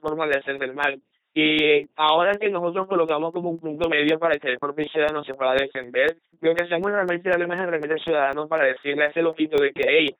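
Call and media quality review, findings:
LPC-10 vocoder: buzzy, robotic speech throughout, nothing above 3.8 kHz. Ten-pole filter driven by pulse train or noise, heavy damage, consistent with 2.4 kbit/s LPC-10.

Periodic USB or driver dropouts: regular ticks every 0.25 s, 0.08 to 10.08 s, around forty. Bus or driver stall replacing about a millisecond with silence.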